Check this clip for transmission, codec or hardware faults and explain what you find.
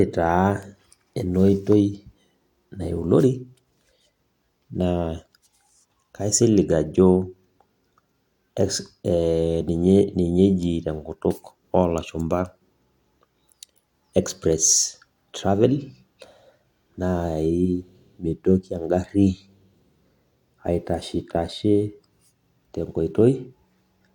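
No faults detected in this clip.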